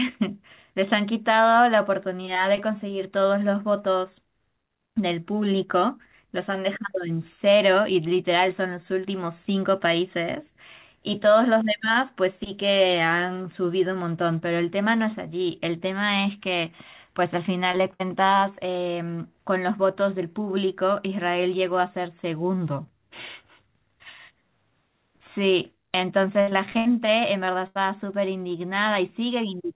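Short concealed packet loss appears at 17.72 to 17.75 s and again at 17.77 to 17.81 s. Each time about 20 ms of the call arrived too late for the decoder, and the receiver covered the hole by extending the preceding sound before blending back into real audio. The result is a quick double smear, a tiny wobble that can swallow a brief consonant. The band stays capped near 4 kHz throughout, which fits a narrowband G.711 call path.

A burst of packet loss follows at 17.93 to 18.02 s. About 60 ms went missing in one run. The receiver stretched the last sound across the gap and let it fade, so a held buzz or thinning hiss replaces the real material. Then the audio picks up further along, with that slice simply gone.

Repeated packet loss (robotic sound) runs from 26.42 to 26.87 s. Four separate gaps fall in under half a second, the longest about 74 ms, and together they remove about 200 ms. Each patch barely finishes before the next hole opens, so concealment fills over two-fifths of the stretch. 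This gives a choppy texture with fragments missing.

Short concealed packet loss returns at 27.45 to 27.49 s, a single 20 ms smear of the same kind.

A second burst of packet loss hits at 27.67 to 27.77 s. This is the longest single hole, about 80 ms, heard as a fading buzz or hiss before the sound resumes past the lost portion.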